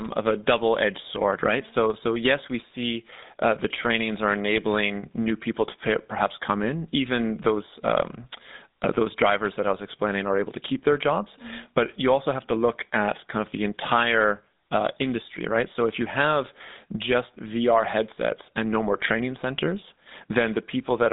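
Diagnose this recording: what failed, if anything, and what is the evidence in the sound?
The codec stage is at fault: GSM full-rate coding runs throughout. The speech sounds plainly buzzy and gravelly. Nothing reaches above 3.8 kHz, and the band spans 200 Hz to 3.7 kHz. A coarse, pulse-driven vocal-tract model rebuilds the sound, which fits 13 kbps GSM full rate.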